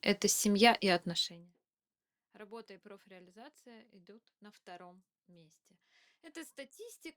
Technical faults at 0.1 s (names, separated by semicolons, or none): none